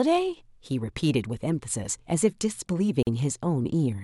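At about 3.03 s the speech drops out for roughly 43 ms, until 3.07 s, then picks up exactly where it left off. That's a gap at a join of encoded pieces. The audio was encoded in separate chunks and stitched together untrimmed, so the encoder's start-up silence and end-of-chunk padding stayed in. You hear a short hole, with the edges smeared by the codec.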